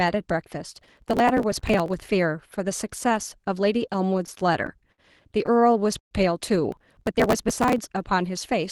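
Speech, with two kinds of fault. Processor overload crackle runs from 0.73 to 1.99 s and again from 6.72 to 7.78 s: a gritty, tearing burst over the voice, made of many tiny hard-edged skips. The texture fits very short buffers of roughly 5 ms being dropped over and over as the processor misses its deadlines. Audio is lost in these dropouts, so the sound is rough rather than stretched. Repeated stalls (stutter) appear from 3.94 to 5.01 s, with ten short holds totalling 145 ms and the longest 60 ms, and from 5.46 to 6.14 s, with five holds totalling 170 ms and one as long as 120 ms. In these spans the jitter buffer kept running dry as packets came late, so the receiver extended the last sound and faded it during the longer waits. Unlike the crackle, nothing is lost here. The speech drags and hiccups instead of tearing.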